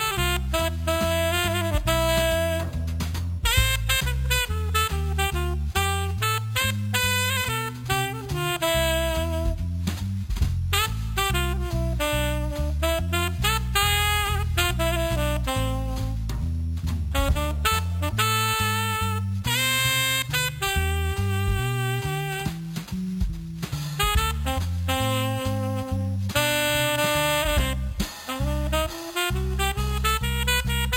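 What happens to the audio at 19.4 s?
At 19.4 s, as throughout, imaging from sample-and-hold upsampling: 11 kHz audio raised to 44.1 kHz by repeating samples unfiltered. A metallic fizz about 13 dB down mirrors the sound from 5.5 to 11 kHz, showing on a spectrogram as flipped copies; the waveform looks stair-stepped.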